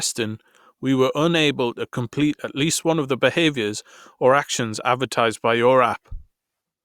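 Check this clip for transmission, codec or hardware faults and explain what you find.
No faults can be heard anywhere in the speech.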